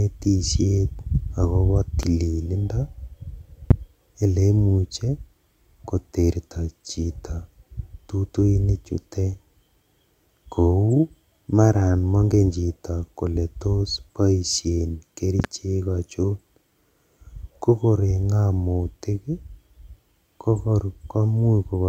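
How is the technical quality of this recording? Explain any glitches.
The recording has three loud pops. The first runs 2.03 to 2.06 s and peaks about 10 dB above the speech. The second, 3.71 to 3.73 s, is the loudest, near 20 dB. After "chito kole tos boishen" comes a double pop, 15.40 to 15.47 s, around 15 dB. Each is likely a voltage spike from a plug, switch, static or driver glitch. The following circuitry shapes it into a sharp thump. The speech continues underneath.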